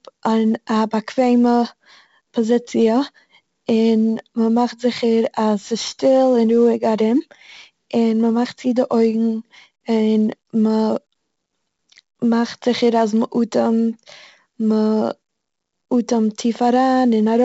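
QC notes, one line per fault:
throughout 4-bit ADPCM compression. Each sample is coded as a coarse 4-bit step from a prediction. The heavy error noise tracks the speech level, so loud syllables turn gritty and sharp attacks distort. Nothing sounds above 7.7 kHz, which fits a 16 kHz, 64 kbps stream.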